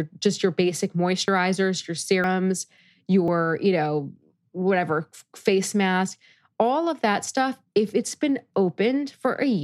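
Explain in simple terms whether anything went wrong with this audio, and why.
Yes, there are three small glitches in this speech. At 1.28, 2.24 and 3.28 s the voice jumps ahead, as if a sliver of it was snipped out. The middle one skips the most, around a tenth of a second; the other two lose less. This is likely a dropped buffer (overrun): the recording software fell behind, fresh audio overwrote a chunk before it was saved, and the gap closed up without silence.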